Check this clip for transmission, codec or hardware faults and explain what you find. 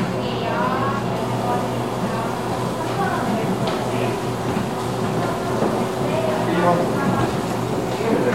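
No transmission, codec or hardware faults can be heard anywhere in this recording. Nothing in it points to a problem in how it was captured or carried.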